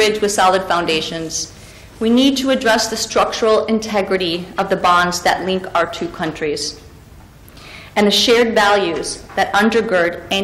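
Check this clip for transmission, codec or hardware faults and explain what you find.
No technical fault can be heard anywhere in the signal.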